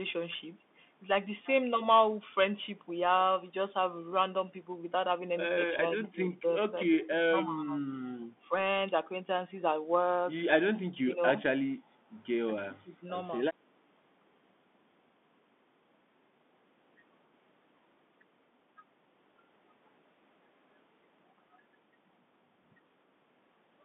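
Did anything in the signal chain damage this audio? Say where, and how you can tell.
Yes. Bluetooth CVSD headset codec damage runs through the whole clip, at the codec stage. The band sits between 200 Hz and 3.6 kHz, sibilants turn scratchy, and a granular hiss lies underneath. A one-bit delta coder whose adapting step cannot keep up with fast, loud high content would produce this, which fits 64 kbps CVSD.

Speech suppressed in double talk occurs at 5.75–6.5, 6.67–6.76, 7.08–7.77, 11.03–11.21 and 12.66–13.05 s, in call processing. The speech dips by roughly 10 to 30 dB, deepest near 7.1–7.8 s. This is likely an echo canceller that could not separate the local talker from the loudspeaker echo and ducked everything.

Background gated by the echo canceller shows at 8.05–8.21 s, also in call processing. The room sound drops by about 12 dB for roughly 150 ms, then returns. The canceller clamped the microphone while the loudspeaker was active and then released it.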